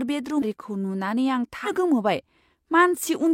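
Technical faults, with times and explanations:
0.38 to 0.43 s and 1.63 to 1.69 s, damaged data in a compressed stream: Two short bursts break into the speech, each lasting about 60 ms. Each is a brief chirp or blip that does not belong to the voice. Here the compressed data was corrupted. The decoder could not read those frames correctly. It lost its place in the stream and had to search for the next valid frame header. The garbled output during that search is the glitch you hear.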